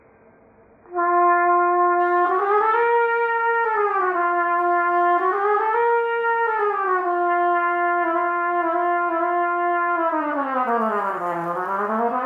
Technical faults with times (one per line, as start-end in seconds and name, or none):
0.00-2.00 adaptive stream starting at a low bitrate